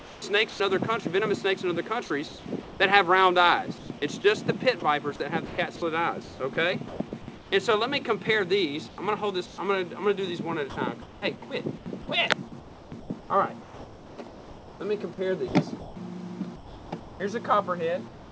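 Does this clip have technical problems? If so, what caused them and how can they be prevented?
Yes. There are three kinds of problem.

Comfort noise in place of the background: From 0.0 to 0.60 s, about 0.32 s of the real background gives way to a smoother, synthetic noise. The likely cause is discontinuous transmission. The sender stopped sending in a pause, and the receiver filled the gap with generated noise. To prevent this, disable discontinuous transmission on the sending side.

Sound dropped by the voice detector: From 0.50 to 0.60 s, 100 ms of sound is lost and replaced by that steady noise. This is likely because the sender's voice detector took real sound for background and stopped sending until it triggered again. To prevent this, lower the detector's threshold or add hangover time.

Sound chopped by the voice detector: Two stretches have repeated holes filled with comfort noise. 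From 2.28 to 7.52 s, about 1.2 s is replaced. From 8.88 to 18.32 s, about 3.2 s is replaced. The likely cause is the detector switching between sending and not sending several times, so quieter parts vanish. To prevent this, tune the voice detector or turn it off.

The clip also passed through a call path with nothing above 8 kHz. That fits a wideband codec such as G.722 and is not a fault.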